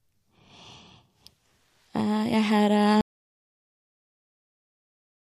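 A short speech clip with an audio dropout to silence. At 3.01 s the speech stops mid-flow. From there to the end the signal is silent. No room tone or hiss remains. The sound never returns. The likely cause is a lost input: a disconnected device, a failed link or a stray mute. The recorder kept writing silence after that point. Whatever was said after 3.01 s is missing.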